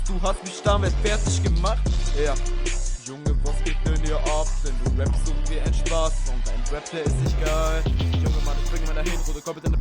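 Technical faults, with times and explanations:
7.25–9.81 s: imaging from linear upsampling. Straight-line interpolation, which fits a 22 kHz source, leaves faint mirror images at 11 to 22 kHz. Highs sound dulled with light metallic shimmer.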